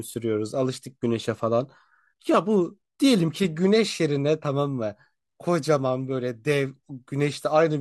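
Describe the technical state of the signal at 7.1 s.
At 7.1 s the speech is intact, with no fault; only the light, steady texture of what is likely low-delay AAC compression carries through.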